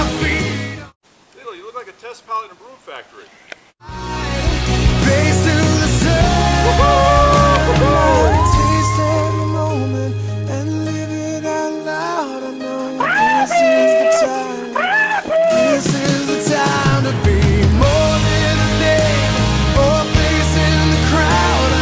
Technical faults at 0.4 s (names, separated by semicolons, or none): resampler restarted on every block